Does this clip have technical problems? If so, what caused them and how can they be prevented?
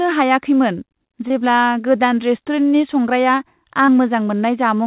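Yes. Short concealed packet loss at 1.28–1.32 s and 3.86–3.90 s: about 20 ms of audio never arrived, so the receiver stretched the preceding sound, leaving a brief smear instead of a dropout's silent gap. A more stable network or a deeper jitter buffer would prevent it.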